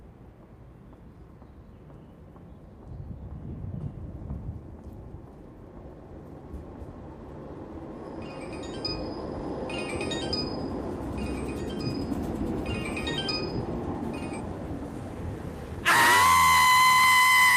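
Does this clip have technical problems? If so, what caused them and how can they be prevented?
No, this clip has no technical problems, so there is nothing to trace to a cause or to prevent.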